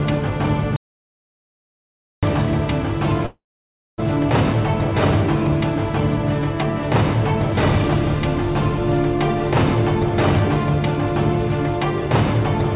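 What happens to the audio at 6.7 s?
Nothing goes wrong at 6.7 s: the audio continues intact through that moment, carried by the narrowband call path with nothing above about 4 kHz.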